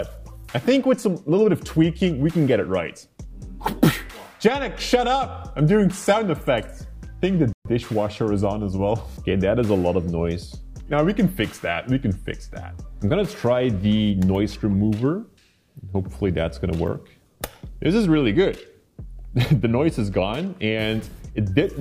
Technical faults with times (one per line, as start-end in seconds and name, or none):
7.53-7.65 playback stall